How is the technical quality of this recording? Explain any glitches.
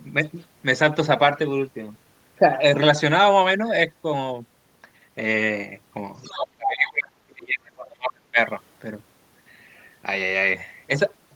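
Two related echo-canceller faults appear in the middle of this speech recording, both clustered around 6 to 8 seconds.

From 6.18 to 6.47 s, the other side's voice is leaking through: loudspeaker echo the canceller likely failed to remove slips in as a second voice, roughly 10 dB under the talker.

From 6.5 to 8.38 s, speech is suppressed in double talk: with both sides overlapping, the canceller likely clamped everything down, so the talker's voice collapses by as much as about 40 dB across roughly two seconds.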